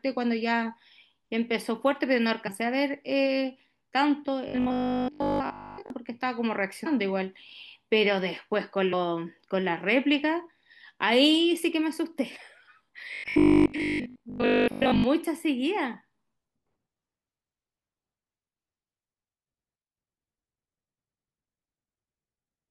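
At 2.46 s the speech jumps forward with a brief smeared blip rather than a click: compressed frames skipped. About a tenth of a second is lost, which fits four or five frames of 23.2 ms dropped or rejected as damaged. Overlapping neighbouring frames soften the join.

From 4.48 to 5.90 s the speech becomes a stiff metallic buzz at 50 Hz that still roughly tracks the syllables: robotic sound from repeated short buffers. Audio likely arrived too slowly, so a 20 ms stretch was replayed repeatedly, covering most of the passage, while the real audio was skipped.

At 6.85 s and again at 8.92 s the same smeared jump recurs. Each time about a tenth of a second of compressed frames is skipped, consistent with roughly five 23.2 ms frames missing.

From 13.14 to 15.04 s the rigid 50 Hz buzz returns. It is likely the same repeated-buffer pattern, with 20 ms of audio looped over most of that span.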